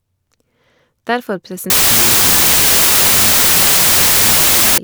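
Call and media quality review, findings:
Wrong sample width, 1.70–4.78 s. Loud noise with the speech buried underneath, running at half speed, an octave low. Fits 32-bit integer data read as 16-bit: byte pairs split, only high halves carry signal. Likely decoder or file-format handling.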